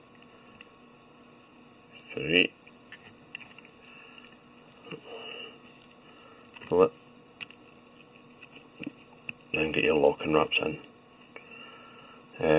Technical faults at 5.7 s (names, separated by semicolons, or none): none